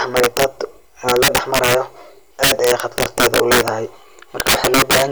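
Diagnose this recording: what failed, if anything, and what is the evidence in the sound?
Integer overflow in the sample-format conversion or a fixed-point gain stage. Throughout the speech, the loudest peaks break into harsh, violent cracks that are far sharper than ordinary clipping. The signal was driven about 11 dB past full scale, and instead of being limited, each excursion wrapped around to the opposite sign, jumping across the whole range. Only a few percent of samples exceed the limit, so the cracks cluster on loud syllables.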